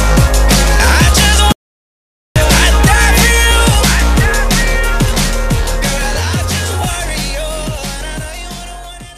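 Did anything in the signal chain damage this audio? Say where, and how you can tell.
Yes. The input to the recorder was most likely lost for a moment, through a dropped device connection or a mute in the capture path, while the recorder kept writing silence. The result is an audio dropout to silence from 1.52 to 2.36 s: the sound cuts off abruptly in mid-flow and returns just as abruptly about 0.84 s later. The gap is silent with no room tone at all, and whatever was happening during it is gone.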